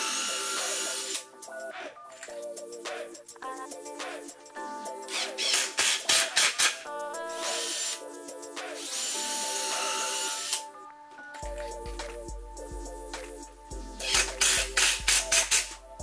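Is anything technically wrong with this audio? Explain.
No, nothing technical is wrong.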